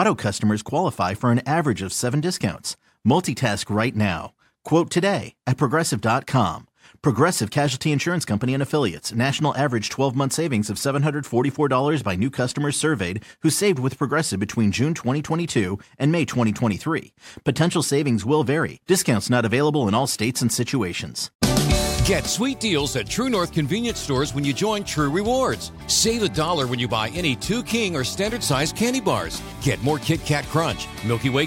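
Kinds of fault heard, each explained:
No technical faults are audible anywhere here.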